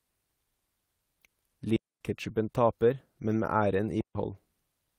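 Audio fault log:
1.76–2.01 s and 4.01–4.15 s, digital wireless dropout: the audio drops into clean near-silence for about 250 ms and then 144 ms, with no noise burst on either side. The wireless receiver lost too much data and muted quickly rather than playing corrupted audio.
2.23–2.29 s and 3.31–3.33 s, lost packet rebuilt from error correction: the speech continues without any gap but briefly turns rougher and noisier, for 40 ms and then 20 ms. This points to two lost packets and then one, each replaced by the lower-bitrate copy carried in the following packet.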